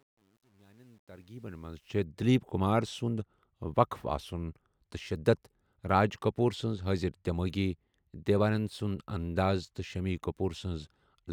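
Truncation distortion on a fade runs from 0.0 to 2.00 s, just before "دِلیٖپ کُمار", and is worst from 0.0 to 1.52 s. As the speech fades in over those two seconds, the low-level signal is rounded to too few steps with no dither, which fits a stage keeping about 10 bits. At the quietest part the waveform collapses into coarse square steps, so the opening sounds gritty before the level rises clear of it.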